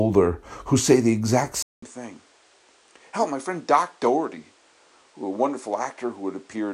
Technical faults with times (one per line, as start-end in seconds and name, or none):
1.62-6.73 input switched to a poorer device